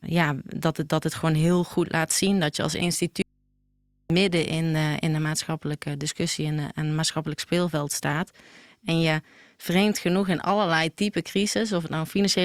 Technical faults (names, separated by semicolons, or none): audio dropout to a faint residue